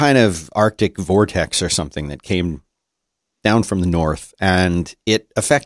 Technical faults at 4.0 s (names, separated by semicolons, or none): none